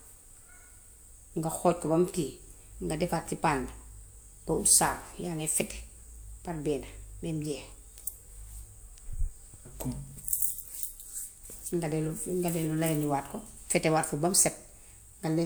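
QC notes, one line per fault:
Nothing to flag here; the speech comes through without any technical problems worth a note.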